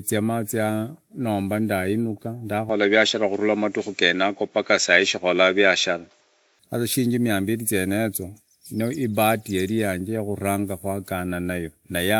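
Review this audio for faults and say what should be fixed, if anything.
From 2.69 s to 6.59 s the speech turns dull and boxy, with nothing above 7.5 kHz, a level shift of roughly 5 dB and a faint new background noise. The switch comes just before "sasa shiringi mia mbili". The likely cause is the input switched to a poorer device. Lock recording to a single microphone and turn off automatic input switching.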